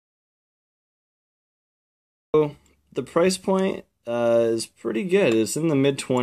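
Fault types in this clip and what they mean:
Audio dropout to silence: the clip opens in dead silence with no room tone until 2.34 s, likely from input lost while recording continued.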